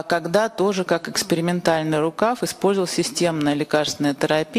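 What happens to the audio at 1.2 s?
Nothing goes wrong at 1.2 s; the audio runs through that moment without any dropout, glitch or other fault.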